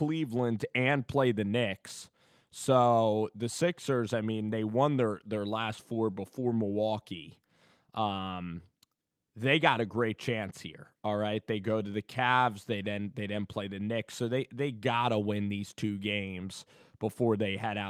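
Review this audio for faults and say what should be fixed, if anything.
I found no faults in this audio, so nothing needs to be fixed.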